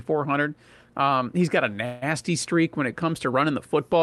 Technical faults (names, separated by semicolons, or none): call audio freeze